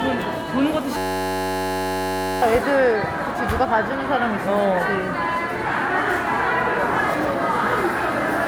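From the start and through the whole clip, the sound has a swirly, hollow smear and blunted attacks, more degraded than a single 128 kbit/s MP3 would leave. This points to generation loss, likely from the audio being re-encoded as MP3 around seven times. Each pass requantises on a shifted frame grid, so spectral holes and noise compound. A single low-bitrate encode gives steady, uniform artefacts, but here they are layered and warbling.

From 0.97 s to 2.42 s, the sound gives way to a flat, steady buzz at about 94 Hz. This is a system hang loop. The playback side stalled while the hardware kept replaying the same 10.67 ms slice of its ring buffer, which fits a 512-sample buffer, for about a second and a half. A dropout would go silent and a stutter would jump between different fragments, but this loop repeats one identical fragment exactly.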